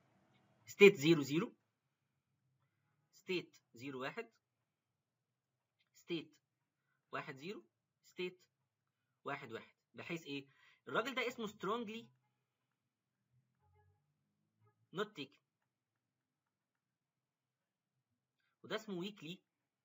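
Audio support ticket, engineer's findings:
Zipper noise, 0.72–2.19 s. Gain drops about 15 dB in 1 dB steps, around ten per second, unsmoothed. Each step clicks, giving a ticking texture while the level falls. Probable component: gain stage updating once per buffer without ramping. Distinguished from a smooth level change by the regular ticks tied to the fade. Ticks stop once the level settles.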